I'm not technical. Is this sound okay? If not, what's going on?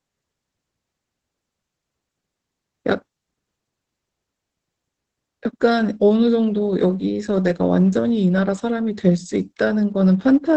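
No. Heavy Opus voice compression squeezed the speech throughout, so it sounds muffled, hoarse and slightly robotic, with its crisp top end cut away.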